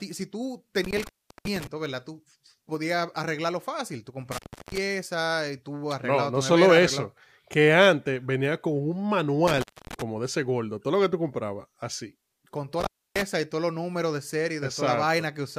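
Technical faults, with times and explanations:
0.84–1.67 s, intermittent contact: the speech cuts out for about 380 ms with crackle at each edge, leaving faint hiss while the line is open, unlike a buffer skip.
1.47 s, dropped buffer (overrun): a small jump in the speech and no gap, likely a roughly 10 ms stretch of samples overwritten before being read.
3.24 s, dropped buffer (overrun): another skip with no silence, likely about 10 ms lost to an overrun and the two sides butted together.
4.32–4.78 s, intermittent contact: a dropout of about 340 ms bounded by crackle, with hiss filling the gap instead of a clean jump.
9.48–10.02 s, intermittent contact: the line opens for about 250 ms, crackling at the break and rejoin, with faint hiss in between.
12.80–13.22 s, intermittent contact: a cut of about 290 ms, crackly edges and hiss during the open line, distinct from a seamless skip.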